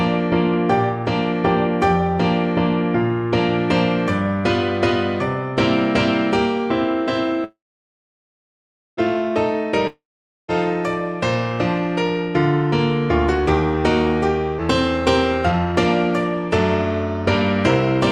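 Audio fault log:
7.44–8.99 s, call audio freeze: Packets were likely held up in transit until the jitter buffer ran dry. The last sound carries on briefly and fades, leaving about 1.4 s of silence. When audio resumes it picks up exactly where it stopped, so nothing is lost, but everything after plays about 1.5 s late.
9.87–10.50 s, long network dropout: A stretch of audio likely never reached the receiver. A short fading tail of the previous sound gives way to about 0.5 s of silence. Playback then returns further along, with about 0.62 s of the original audio missing.
14.58–14.60 s, skip ahead: Later audio was already queued when an earlier stretch was discarded, so playback jumps forward with essentially no gap. Roughly 300 ms of material is gone, and the sound on either side of the jump is joined almost directly, which makes an abrupt splice.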